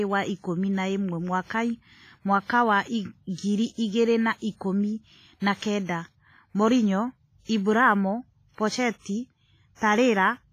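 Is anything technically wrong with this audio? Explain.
Yes. Throughout the speech, the sound is washy and ringing, with hiss that breathes with the signal and nothing above 15.4 kHz. That points to heavy WMA compression, likely at a low bitrate near 24 kbps. A spectrogram shows a hard ceiling and blotchy gaps.

From 5.57 to 5.62 s, pre-echo appears. Quantisation noise, spread across the codec block, smears about 51 ms of hiss ahead of a sharp attack. In the waveform, a short band of noise precedes the onset.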